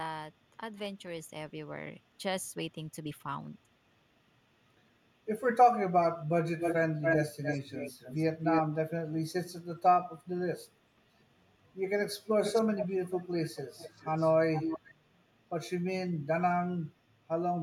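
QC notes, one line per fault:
6.59–8.62 s and 12.43–14.94 s, echo leak: a delayed copy of the speech comes back, about 284 ms late and roughly as loud as the original in the first stretch, then about 430 ms late and a bit quieter in the second. Likely a loudspeaker echo the far end's canceller didn't fully remove.
12.87–12.93 s, speech suppressed in double talk: the voice briefly drops out, a deep dip of roughly 20 dB lasting only a fraction of a second. It lands inside the second echo stretch, likely because the canceller couldn't separate the talker from the echo and turned both down.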